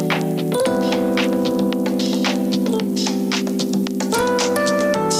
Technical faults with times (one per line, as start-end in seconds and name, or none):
none